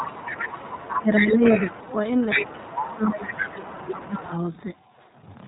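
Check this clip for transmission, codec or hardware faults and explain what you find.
Yes, several faults are audible: codec coloration throughout, leaked far-end speech, double-talk suppression, and one brief frame loss.

iLBC codec, throughout: The speech sounds band-limited, with nothing above 4 kHz, and has a plainly rough, slightly synthetic grain. This fits iLBC's 15.2 kbps, 20 ms-frame mode, which codes each frame's excitation independently of the one before.

Other side's voice leaking through, 0.00 to 1.97 s, 2.18 to 2.47 s and 2.66 to 4.14 s: A second voice runs under the talker. It sits roughly 10 dB below the main speech in the first and third spans and at about equal level around 2.2 to 2.5 s. The likely cause is loudspeaker playback of the far end that the echo canceller failed to remove from the microphone.

Speech suppressed in double talk, 0.91 to 1.45 s and 2.34 to 4.33 s: While that second voice is present, the talker dips by around 15 dB. 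The dips total a few hundred milliseconds in the first span and most of two seconds in the second. This is likely the echo canceller attenuating everything when it could not separate the talker from the echo.

Lost iLBC frames, 4.54 to 4.57 s: A brief held, slightly buzzy fill replaces one 20 ms frame. The decoder repeated the last pitch cycle mixed with noise. Because iLBC frames stand alone, the speech recovers immediately afterwards.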